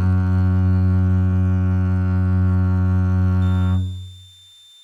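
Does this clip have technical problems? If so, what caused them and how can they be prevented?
Yes. From 3.42 s to the end at 4.84 s, a switching supply whistle sits under the music: a thin high tone wandering between 3.57 and 3.59 kHz, roughly 30 dB below the music. A switching power supply is oscillating at an audible rate, either in burst mode or beating against another supply. Its slight pitch drift sets it apart from mains hum, which holds fixed low harmonics of 50 or 60 Hz. Using supplies that switch well above 20 kHz, with proper filtering and separate grounding for the audio, prevents it.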